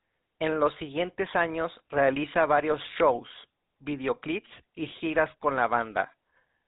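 From start to finish the speech carries the signature of the GSM full-rate codec, the original mobile phone coder. It rebuilds the voice from a vocal-tract model driven by a thinned, regularly spaced pulse excitation at around 13 kbps, so everything above 4 kHz is gone and there's a plainly audible buzzy, gravelly roughness.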